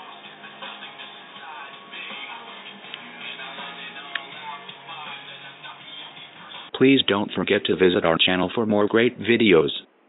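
Nothing in the audio stood out as a technical problem on listening.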